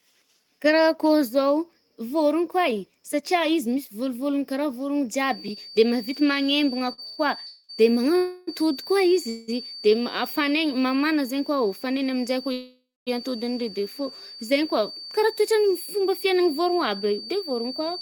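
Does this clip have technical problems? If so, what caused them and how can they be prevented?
Yes, there are four kinds of trouble here.

From 5.13 s to the end there's a feedback whistle, a thin steady tone at 4.6 kHz sitting about 15 dB under the speech and swelling and fading slowly in level. The likely cause is a loudspeaker leaking back into its microphone, with the loop gain parked right at the edge of feedback, so one frequency rings on without building up. Headphones, or lowering speaker volume and enabling echo cancellation, would stop it.

Between 6.79 s and 7.20 s you get repeated stalls, a stutter made of three short gaps, the longest 125 ms, adding up to 190 ms of stretched-out sound, nearly half that stretch. Packets were arriving late or too slowly, so the jitter buffer kept running dry and the receiver extended the last sound each time, with nothing actually lost. A steadier connection, or a slightly deeper jitter buffer, would smooth it out.

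Then come four call audio freezes, at 7.46 to 7.71 s (223 ms), 8.17 to 8.49 s (306 ms), 9.29 to 9.50 s (184 ms) and 12.53 to 13.09 s (539 ms). In each one the last sound hangs on as a fading buzz or hiss, and the longest one drops to silence for about 240 ms before the speech picks up where it left off, so a gap is inserted and no speech is lost. The likely cause is packets held up in the network, which emptied the buffer. Fixing congestion on the path, such as moving off busy Wi-Fi, is the real cure.

Finally, from 16.25 s to 17.81 s there's a jitter buffer speed-up. The speech runs at about 105% speed with the pitch unchanged, so it sounds a bit rushed. After the earlier delays the buffer had built up extra audio, and the receiver trimmed out tiny pitch-period slices, around a tenth of a second in total, to catch up. Keeping the network steady so delays don't pile up avoids this.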